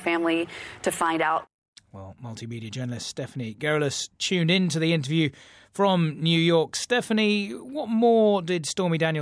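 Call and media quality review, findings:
No faults stood out on listening to this recording.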